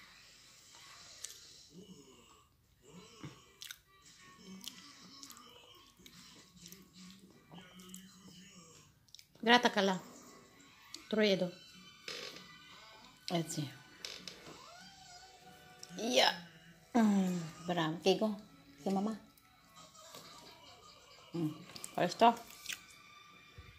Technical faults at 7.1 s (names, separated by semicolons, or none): none